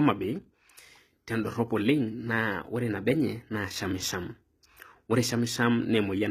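From start to finish the speech has treble that sounds bright but synthetic: s sounds come out gritty and lispy, with a metallic sheen above the lower band. This is likely HE-AAC compression at a low rate, around 20 kbps, where the upper spectrum is rebuilt by copying lower bands upward, so its harmonics fail to line up with those below. Unlike a plain low-pass cut, the highs stay present; they are just not the real ones.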